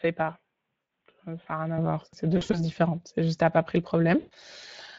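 Speech throughout carries Speex codec damage at 20.6 kbps, plainly audible as hoarse, noisy CELP texture; a spectrogram shows smeared, grainy harmonics. From 0 to 1.78 s the sound is duller, about 5 dB quieter, cut off at 3.8 kHz, then brightens abruptly, likely an input switched to a poorer device. VoIP packet loss concealed by the speech codec stretches sound into a fading buzzy tone or coloured noise at 0.81–0.89 s, 2.37–2.60 s, and 4.19–4.33 s after "t'as pas pris le", visible as smooth, decaying waveform patches.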